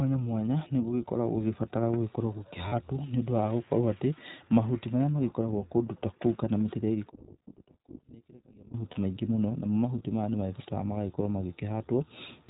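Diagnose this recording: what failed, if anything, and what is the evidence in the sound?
Codec stage: the iLBC codec limits the whole speech clip to narrowband, with nothing above 4 kHz and a rough, synthetic edge. This fits 15.2 kbps with 20 ms frames.

Network stage: lost iLBC frames at 2.68–2.74 s after "nĩ gũgĩkoragwo gũgĩbatara gũkorwo" and at 8.92–8.98 s before "maingĩ mũno na mo". Each gap is a 40 ms slightly buzzy or breathy held vowel that recovers immediately, unlike a clean dropout.

Wiring or playback stage: from 7.10 to 8.74 s, after "kũu kana mĩtĩ ĩrĩa", the speech falls about 27 dB to a faint residue rather than silence. This is likely one channel inverted and cancelling when summed to mono.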